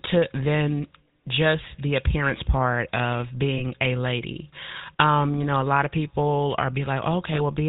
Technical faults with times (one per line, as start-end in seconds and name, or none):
0.00-7.68 GSM full-rate codec
3.58-3.62 lost GSM frames
7.34-7.39 lost GSM frames